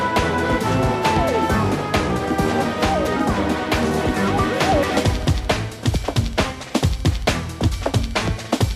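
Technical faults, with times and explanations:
No technical faults can be heard anywhere in the audio. There is nothing to list against any time.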